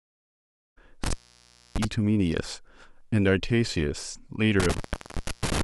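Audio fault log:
1.04–1.85 s and 4.60–5.61 s, intermittent contact: twice, a loose cable or plug connection breaks for a moment and the speech drops out for about 0.63 s each time. Crackle marks each edge as the contacts scrape open and then close again. While the circuit is open the signal is gone and only faint hiss remains, sometimes with some mains buzz. The second break runs almost to the end of the clip.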